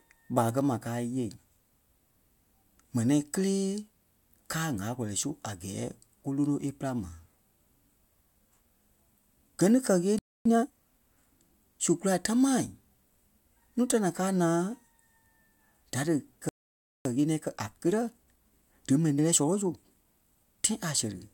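At 10.19 s, just after "ni kɛ́", the speech cuts to silence for about 0.27 s. This is a playback stall. The player likely ran out of data. From 10.45 s to 10.71 s, time-compressed catch-up follows. Small pieces are cut and cross-faded, so speech runs at twice normal speed, same pitch. At 16.49 s a second stall silences the audio for 0.56 s, again likely from a starved buffer. Catch-up then runs from 17.05 s to 20.05 s at 1.15 times speed, hurried.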